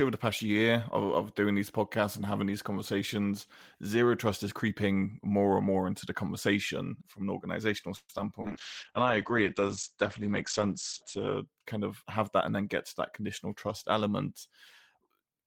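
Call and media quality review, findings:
Call audio freeze, 7.96–8.10 s, right after "conversation from an organizational": the last sound is stretched into a fading buzz, with about 30 ms of near-silence, then the audio resumes where it stopped. Likely late packets draining the jitter buffer. A 0.13 s gap is inserted and nothing is lost.

Short concealed packet loss, 8.18–8.30 s: a brief smear where about 20 ms of audio never reached the decoder. The receiver extrapolates from the preceding sound and crossfades back, adding around 10 ms and trimming delay by roughly 15 ms.

Call bitrate drop, 8.42–11.53 s: the audio turns muffled and coarse. Opus is pushed from 32 to 12 kbps after the bandwidth estimate falls, and audio bandwidth narrows from 20 kHz to 8 kHz. The lowest rate holds for about 3 s before recovering.

Jitter buffer speed-up, 11.91–12.60 s (ending before "get to") and 13.00–13.46 s: the audio runs hurried at 108% speed with pitch unchanged. 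The buffer drops pitch-period chunks to shed excess delay, roughly 70 ms and 50 ms.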